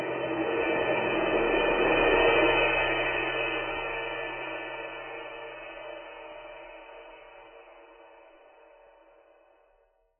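From start to finish the music sounds dull and smeared, with nothing above about 3.1 kHz and a warbly, fizzy texture on sustained tones. That's likely heavy AAC compression at a very low bitrate, around 12 kbps, which drops the top and leaves spectral holes.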